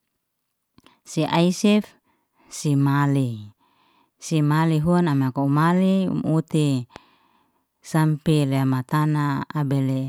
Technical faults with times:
6.96-6.98 loud pop

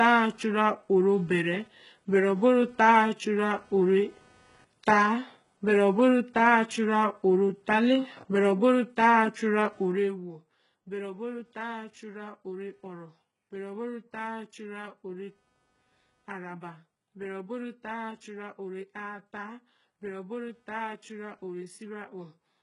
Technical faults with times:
0.00-22.62 computer activity noise
0.00-22.62 HE-AAC compression

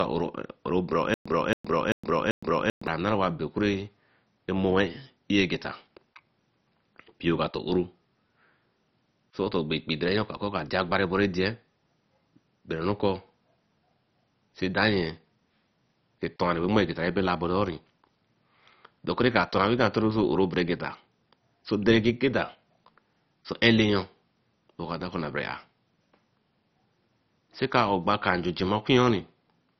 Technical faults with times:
0.00-29.79 MP2 compression
1.14-2.87 stutter with silent gaps

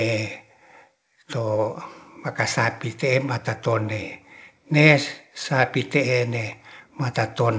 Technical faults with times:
none

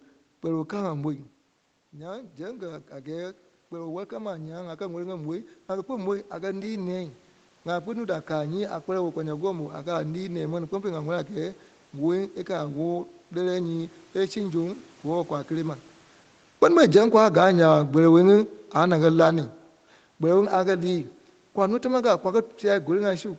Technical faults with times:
1.94-11.59 automatic gain rising
16.57-19.53 automatic gain falling

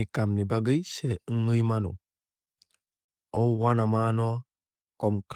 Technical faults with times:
2.45-3.85 repeated stalls (stutter)
4.32-4.84 jitter buffer slow-down

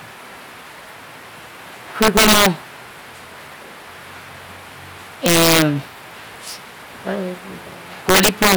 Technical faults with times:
2.02-2.46 integer overflow
5.26-5.62 integer overflow
8.09-8.55 integer overflow

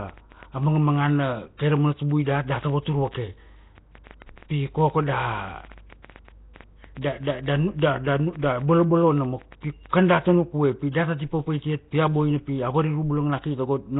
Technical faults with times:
0.00-14.00 Nellymoser compression
0.09-10.05 train of clicks

